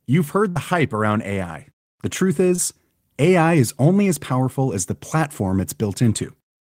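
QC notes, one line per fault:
0.49–0.58 s, burst of packet loss: About 60 ms of speech never arrived in time. The receiver stretched the last sound for roughly 61 ms, fading it into a held smear. Speech resumes at "hype around" with the missing stretch skipped.
2.56–2.60 s, short concealed packet loss: About 20 ms of audio was lost before decoding. The receiver filled roughly 23 ms by extending the preceding sound, then blended back into the real signal. The result is a brief smear or wobble in the speech.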